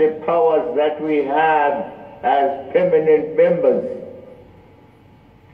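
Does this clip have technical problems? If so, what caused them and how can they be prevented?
Yes. A single click at 0.45 s: likely dropped samples, roughly one sample lost, so the waveform jumps, showing a thin vertical spectrogram line. Prevent with larger buffers and stable clocking.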